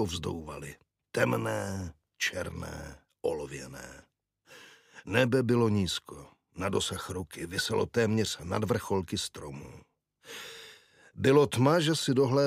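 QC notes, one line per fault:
No technical faults are audible anywhere in the signal, which stays continuous and stable across the whole clip.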